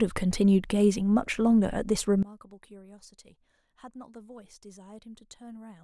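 From 2.23 s to the end, the speech collapses to a faint copy, about 23 dB quieter when heard in mono. This is likely one channel inverted: reversed polarity on one side cancels the centred voice common to both channels.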